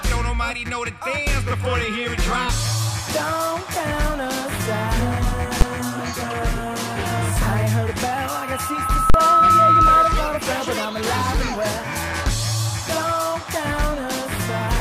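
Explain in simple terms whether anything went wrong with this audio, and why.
Two kinds of fault can be heard.

The first is invalid numbers at full scale. At 5.61 s there is a single, very loud bang. A calculation went wrong and produced impossible numbers. These were pushed to an extreme value, far beyond the normal peaks of the sound. That block is short, which fits a 512-sample buffer. A second, longer one runs from 9.10 to 9.14 s. It is a harsh jolt with a pop at each edge, which fits a 2048-sample buffer.

The second is loudspeaker feedback squeal, from 8.02 to 10.47 s. A microphone picked up the loudspeaker it was feeding. One pitch, at 1.3 kHz, went round that loop and kept growing. Over about one and a half seconds it swells into a steady whistle. It ends up clearly louder than the rest of the sound, then stops at 10.47 s. The second bang lands in the middle of this squeal.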